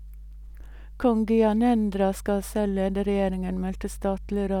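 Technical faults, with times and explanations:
Throughout, mains hum: a steady 50 Hz tone with low harmonics, about 15 dB below the speech, from power-line coupling through a ground loop or nearby transformer.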